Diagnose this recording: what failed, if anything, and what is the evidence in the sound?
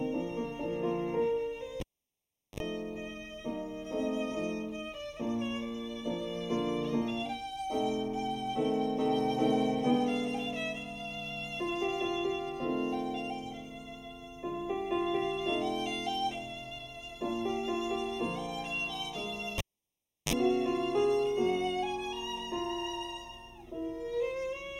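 Throughout, the sound is hollow and phasey, with fixed notches starting around 1.5 kHz and repeating at even spacing above. This is channel delay (comb filtering). One channel lags the other by roughly a third of a millisecond before the mono sum, so shared content cancels at those frequencies.

At 1.80–2.60 s and 19.58–20.33 s there is a pop, then near silence for about 0.75 s and 0.7 s. A 50 Hz buzz lasting about 46 ms and 41 ms follows, then a second pop. This is a cable pulled and plugged in, an analogue wiring fault. The buzz appears while only the tip touches.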